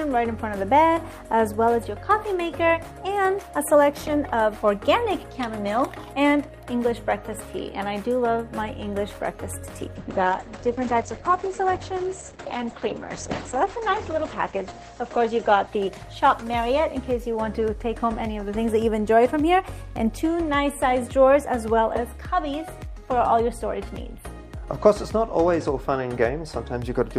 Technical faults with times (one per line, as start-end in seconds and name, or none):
9.97-19.05 call bitrate drop